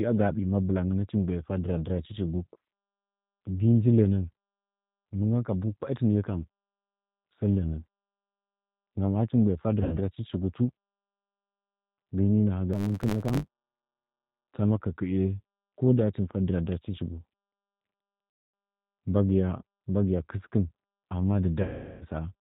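Throughout, the speech carries the rough, slightly synthetic texture of the G.729 codec at 8 kbit/s: nothing above 4 kHz survives, and the model-based rebuild of each frame leaves plainly audible coarseness. From 9.83 to 9.99 s, VoIP packet loss concealed by the speech codec covers a gap of about 90 ms. The decoder stretches its last pitch and filter into a buzzy tone or coloured noise that fades, and the sound stays weak briefly after it returns. From 12.73 to 14.53 s, a block size mismatch (truncated) discards the tail of each block. This produces a 100 Hz buzz and runs the audio 1.16 times fast at near-normal pitch, which fits a 512-sample write size. The same concealment recurs at 18.30 to 18.54 s, covering about 240 ms, and at 21.62 to 22.06 s, covering about 390 ms, with longer concealed stretches.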